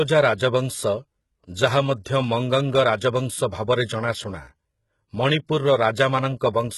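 HE-AAC compression, likely, runs throughout the speech: heavy damage fitting a bitrate near 16 kbps, with nothing above 11.8 kHz. Its treble is rebuilt from copied lower bands, so s sounds turn gritty and lispy.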